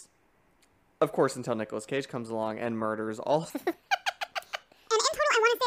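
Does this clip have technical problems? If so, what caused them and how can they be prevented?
Yes. After "along and murders all", from 3.50 s to the end, a section at the wrong speed runs 1.62 times fast, raising pitch about seven semitones. It was likely played or edited against the wrong clock. Prevent it by checking that sample rates and playback clocks match at every editing and export stage.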